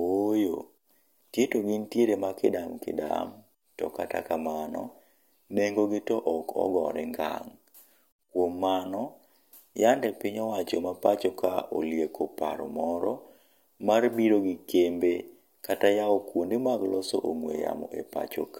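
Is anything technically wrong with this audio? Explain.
No, nothing in this speech recording stood out as a technical problem on listening.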